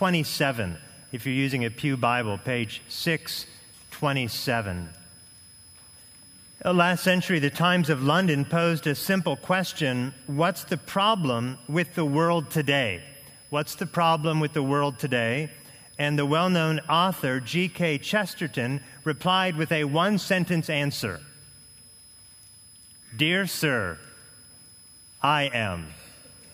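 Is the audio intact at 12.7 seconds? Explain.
No. At 12.7 s a switching supply whistle is present, as it is for the whole clip: a thin high tone near 5 kHz, wandering between about 5.02 and 5.10 kHz, sitting roughly 25 dB below the programme. A switching power supply dropping into an audible burst mode, or beating against another supply, leaks this tone into the audio. Unlike steady mains hum or a fixed digital tone, its pitch drifts rather than holding still.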